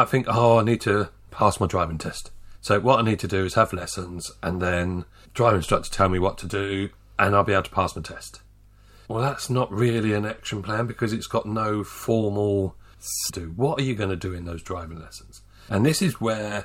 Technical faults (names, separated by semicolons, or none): stream segment skipped